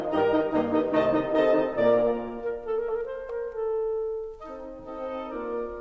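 No technical faults are audible.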